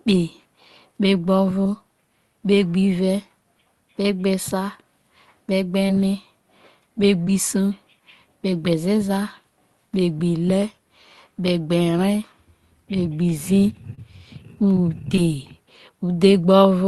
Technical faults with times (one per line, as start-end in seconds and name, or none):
5.87-5.91 short concealed packet loss
7.25-7.29 short concealed packet loss
13.95-13.99 short concealed packet loss
15.15-15.19 short concealed packet loss